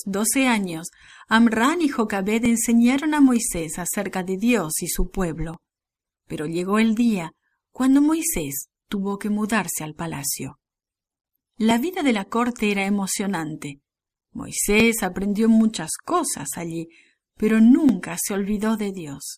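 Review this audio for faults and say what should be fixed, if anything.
A regular click or pop recurs through the speech about every 3.09 s, from 2.46 s to 17.89 s, roughly seven times. These are clock drift buffer slips. The likely cause is two devices running on independent clocks that disagree by a few hundred parts per million, so the buffer between them drifts until a small block of samples, around 70, is dropped or repeated. To prevent it, lock both devices to a shared clock or add asynchronous sample-rate conversion at the boundary.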